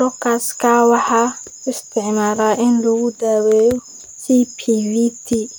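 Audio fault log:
No faults heard anywhere in this speech clip.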